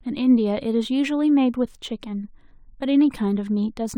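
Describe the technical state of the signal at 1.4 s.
At 1.4 s you're hearing the imaging from linear upsampling that runs through the whole clip. The speech was raised from 24 kHz to 44.1 kHz by joining samples with straight lines, which filters poorly. The top end sounds dulled, and a faint mirrored copy of the spectrum sits between 12 kHz and 24 kHz, roughly 45 dB below the speech, adding a light metallic shimmer to the sibilants.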